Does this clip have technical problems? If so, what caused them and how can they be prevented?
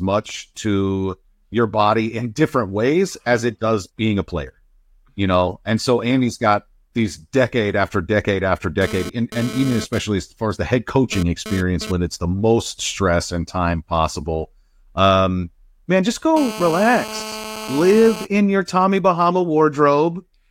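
Yes: GSM phone buzz appears from 8.81 to 11.92 s, intermittent as data transfers, and steady from 16.37 to 18.25 s during a call, about 12 dB below the speech. The audio circuit is rectifying a nearby 2G phone's radio bursts. Unlike mains hum, it is a raspy 217 Hz buzz. Keep phones off or well away from microphones and cables.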